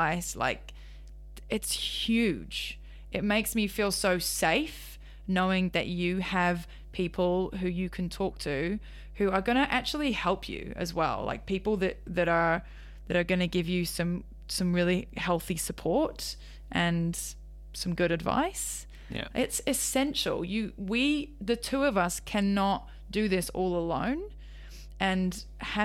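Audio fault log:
Throughout: mains hum. A steady low tone at 50 Hz with some low harmonics sits under the speech at roughly 15 dB below it, so it stays plainly audible in pauses. The power line is getting into the signal path, most likely through a ground loop or a nearby transformer.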